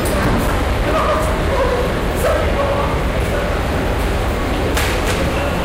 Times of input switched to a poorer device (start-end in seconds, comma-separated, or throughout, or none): none